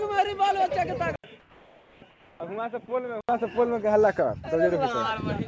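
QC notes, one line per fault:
1.16–3.29 s, input switched to a poorer device: likely a switch to a lesser microphone, after an 80 ms gap; band stops near 3.8 kHz, level drops about 10 dB, boxy tone.
1.40–2.02 s and 2.10–2.40 s, comfort noise in place of the background: background replaced for 620 ms and 300 ms by steady featureless noise, about 4 dB quieter, likely from discontinuous transmission.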